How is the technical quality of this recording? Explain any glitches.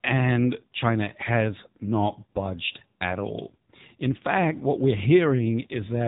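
Poor: the whole recording has passed through the AMR narrowband mobile codec at a low bitrate, which is plainly audible throughout. The codec models the voice with a few pulses per frame, which fits a mode near 8 kbps, leaving speech buzzy, synthetic and cut off above 3.8 kHz.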